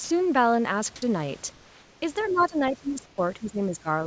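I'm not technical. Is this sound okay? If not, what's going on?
No. At 0.04 to 0.10 s, a brief bit of sound vanishes into a soft hiss. This is sound dropped by the voice detector, likely because the sender mistook it for background and stopped sending.

From 1.52 to 2.02 s, and again from 3.06 to 3.18 s, the room sound turns flat, smooth and slightly quieter. That is comfort noise in place of the background, likely filled in by the receiver during a pause.

From 2.19 to 2.44 s, a faint second voice slips in underneath. This is the other side's voice leaking through, likely from the loudspeaker echo not being fully removed.

From 2.23 s to the end, the main speaker fades and dips, at times quite sharply. That is speech suppressed in double talk, likely because the echo canceller turned everything down while both sides spoke.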